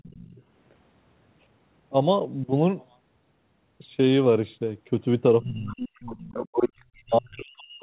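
From 0.0 to 0.42 s a faint second voice sits about 25 dB under the speech. This is the other side's voice leaking through, likely loudspeaker echo the canceller missed. On a spectrogram it shows as weak extra harmonic traces, all within the 4 kHz band of the G.711 call path.

Between 5.41 and 5.79 s the speech is suppressed in double talk, likely because the canceller ducked the talker along with the echo. The waveform pinches in for about 0.4 s, down by about 25 dB.

From 5.78 to 7.03 s the other side's voice leaks through again, nearly as loud as the speech. It is likely the same echo slipping past. The spectrogram shows two overlapping sets of harmonics.

From 7.02 s to the end, speech suppressed in double talk likely cuts the talker hardest, by about 40 dB. The waveform falls almost flat, and the spectrogram goes nearly empty.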